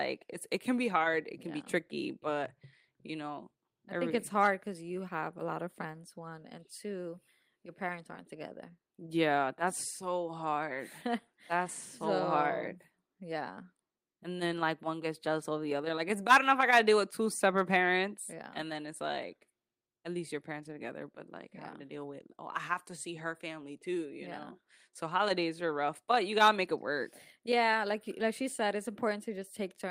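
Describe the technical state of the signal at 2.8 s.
At 2.8 s the speech signal is intact, with no fault audible at that moment.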